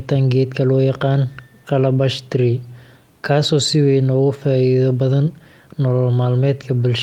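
No technical faults can be heard anywhere in this recording.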